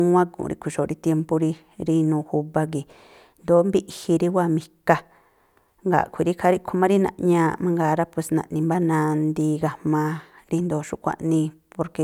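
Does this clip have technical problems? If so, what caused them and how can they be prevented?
No, nothing in this speech clip points to a technical problem. There is nothing here to trace back to a cause or to prevent.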